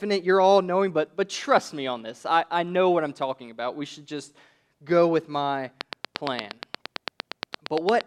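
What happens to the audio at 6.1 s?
At 6.1 s you're inside a train of clicks that starts at 5.81 s, right after "just go with my", and runs to 8.02 s. It's a steady tick about 8.65 times a second, around twenty clicks, poking well above the speech, likely from electrical interference or a faulty connection or power supply.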